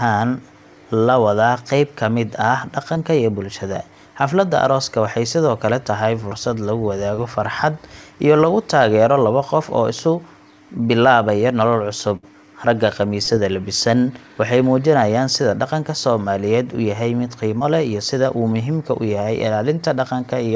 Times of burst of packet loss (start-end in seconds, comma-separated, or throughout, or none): 12.17-12.25